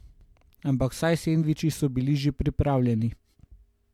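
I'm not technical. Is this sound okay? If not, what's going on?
Yes, nothing stood out as wrong when listening to this recording.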